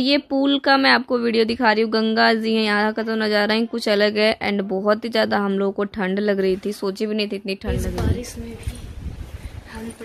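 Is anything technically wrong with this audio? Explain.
No, nothing technically wrong can be heard here.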